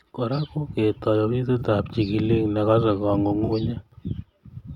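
Concealed frames interrupt the speech at 0.36 to 0.39 s, 1.59 to 1.62 s and 3.44 to 3.50 s, each consistent with about two frames. These are corrupt frames concealed: the decoder caught damaged AAC data and papered over it.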